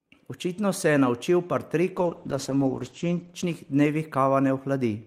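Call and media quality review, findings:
Call bitrate drop, 1.99–4.61 s: speech turns coarse and watery, top end cut from full band to about 8 kHz, worst for about 1.06 s. Encoder-side, bandwidth estimate fell; the sound fits Opus starved from 40 to 11 kbps.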